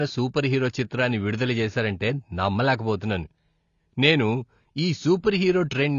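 From start to finish the speech sounds dull and smeared, with nothing above 7 kHz and a warbling, fizzy texture on sibilants. That points to a low bitrate, likely AAC compression. Unlike a plain low-pass filter, the remaining bands swirl and smear.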